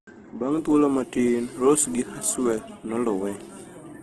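Throughout the speech, the sound is rough and grainy, with nothing above 12.3 kHz. A spectrogram shows a hard ceiling there and noisy, smeared bands in place of clean harmonics. This is likely heavy Opus compression in music mode, fitting about 12 kbps.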